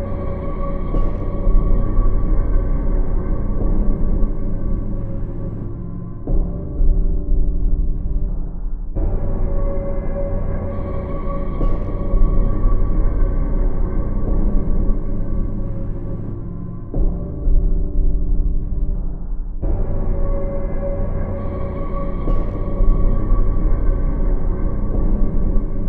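Nothing is technically wrong with this clip.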